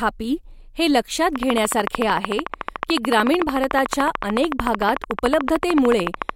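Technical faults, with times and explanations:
1.36–6.30 s, train of clicks: after "हे लक्षात", regular ticking at 13.6 per second, well above the speech; likely interference pulses, seen as evenly spaced vertical spectrogram lines.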